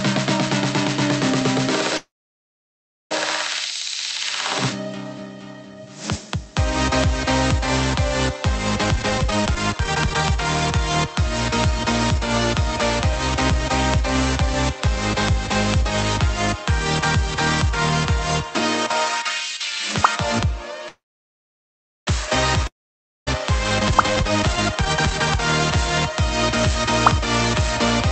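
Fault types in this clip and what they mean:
Call audio freeze: The sound stalls at 1.97 s and again at 20.88 s. Each time there's a short fading tail, then roughly a second of silence, about 1.04 s and 1.09 s. Playback then picks up right where it left off. Nothing goes missing, but each stall pushes everything after it about 1.1 to 1.2 s later. The likely cause is packets getting held up in transit until the jitter buffer ran dry.
Jitter buffer speed-up: After the stalls, the receiver had more audio queued than it wanted, so it trimmed tiny pitch-period slices over and over to catch up. From 8.84 to 15.34 s, the sound plays at 117% speed, and from 23.70 to 27.80 s at 126%, with the pitch unchanged. Each stretch sheds around a second and comes across as noticeably rushed, the second one more so.
Long network dropout: At 22.67 s, the sound cuts out for about 0.6 s. There's a brief fading remnant, then roughly 0.56 s of silence before it resumes at 23.29 s. 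Unlike the freezes, this stretch is simply gone, and the sound jumps ahead past the missing part. The likely cause is no packets arriving at all for that moment, with those packets never recovered.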